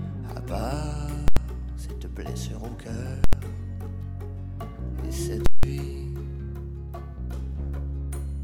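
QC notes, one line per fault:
1.28 s, 3.24 s and 5.46 s: invalid numbers at full scale. Output pins to one extreme for 85, 85 and 171 ms, fitting 4096- and 8192-sample blocks. Pops bracket silence, unlike clipping, which keeps the sound.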